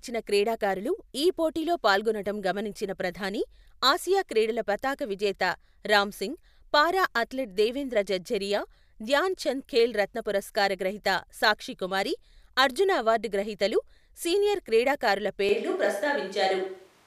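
This is a speech clip with one fault near the end. After "అవార్డు గ్రహీతలు సీనియర్ క్రీడాకారుల", at 15.49 s, the sound suddenly turns roomy and hollow, with thinner bass. The level stays about the same. Background noise sits about 35 dB below the speech. It lasts to the end. The likely cause is a switch to a distant microphone, after the close microphone's signal was lost.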